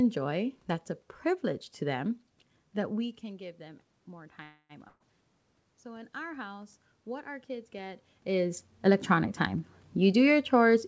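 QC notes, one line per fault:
4.43–4.72 s, call audio freeze: right after "can give them more" the sound stretches into a fading buzz for about 265 ms, with a brief 30 ms dip to silence before it picks up again. Nothing is lost, just delayed. The likely cause is late packets draining the jitter buffer.
4.87–5.03 s, burst of packet loss: the receiver smears the last bit of sound into a decaying buzz or hiss for roughly 126 ms, then jumps ahead. About 120 ms of real audio never makes it, so the resumed sound lands further on than it should.
5.83–9.12 s, automatic gain rising: the incoming level drops by about 17 dB, and the AGC slowly compensates with about 6 dB of extra gain. The voice and the room noise swell together over those three seconds.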